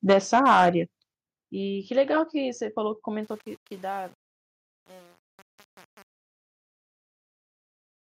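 From 0.09 to 0.7 s the speech peaks are flattened with a harsh crackle, likely microphone overload: the input runs about 7 dB over full scale, clipping around one sample in twenty. At 0.13 s the level drops abruptly by about 4 dB, and at 1.14 s by about 8 dB more. Both drops are likely the microphone volume being stepped down by software reacting to the overload. From 3.23 s to the end, during the fade-out, truncation distortion sets in. The quiet end turns gritty, which fits a fade computed with only about 7 bits and no dither.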